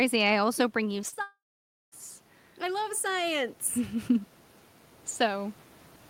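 Right around 1.01 to 1.05 s, then 1.09 to 1.14 s and 1.14 to 1.18 s, you get a quick cluster of short concealed packet loss. Bits of the speech, roughly 20, 40 and 20 ms, didn't reach the decoder in time, so the receiver patched each hole by stretching the last bit of sound and blending back in. It comes across as a little smeary wobble, with a short sound possibly swallowed.

Straight after, from 1.22 to 1.94 s, there's a long network dropout. The concealment carries the last sound on as a fading buzz for a moment, then about 540 ms of near silence, with just the room noise underneath, before the speech picks up again further along with that chunk simply gone. The likely cause is the connection stalling for roughly 0.7 s, since nothing was arriving to play.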